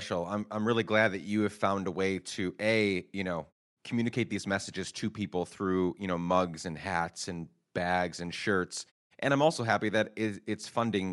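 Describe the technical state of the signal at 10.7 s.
At 10.7 s the speech has the same Bluetooth LC3 compression that runs through the whole clip, and the damage is plainly audible: a grainy top with a breathy edge. That's likely a transform codec filling the discarded upper spectrum with noise, which fits around 48 kbps in 10 ms frames.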